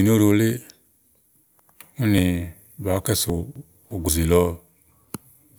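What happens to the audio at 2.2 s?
At 2.18 s the software likely failed to read a buffer before the hardware overwrote it, a dropped buffer (overrun). Roughly 50 ms of speech is lost and the edges join directly, giving an abrupt jump forward, with no silence.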